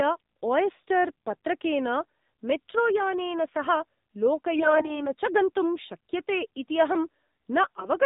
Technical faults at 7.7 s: AMR narrowband mobile codec; AMR bit errors

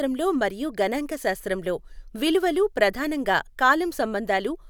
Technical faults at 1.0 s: none

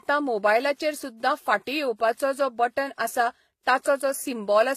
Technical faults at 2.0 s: transcoding between lossy codecs

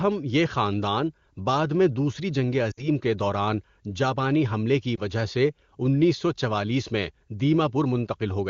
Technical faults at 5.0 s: lost AMR speech frames

